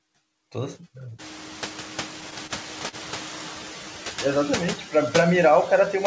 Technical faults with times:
0.00-6.06 noise suppressor artifacts
1.18-3.49 noise suppressor catching up
2.47-2.52 short stall from a late packet
2.88-2.96 short stall from a late packet

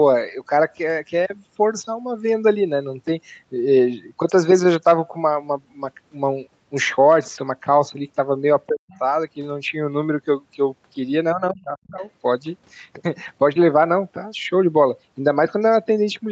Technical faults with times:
8.68-8.92 speech suppressed in double talk
8.92-8.99 other side's voice leaking through
11.34-12.03 speech suppressed in double talk
12.01-12.05 other side's voice leaking through

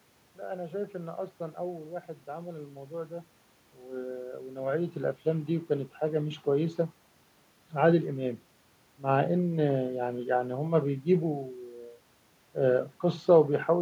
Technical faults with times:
none

